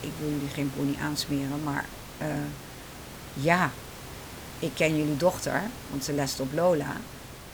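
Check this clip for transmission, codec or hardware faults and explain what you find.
No transmission, codec or hardware faults are audible.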